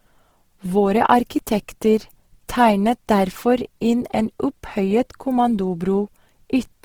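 From start to end, a likely cause is an Opus encoder in its music (CELT) mode running short of bits and filling bands with folded or noise content. The speech sounds plainly rough, grainy and noisy, fitting roughly 16 kbps, while the full bandwidth to about 20.4 kHz remains.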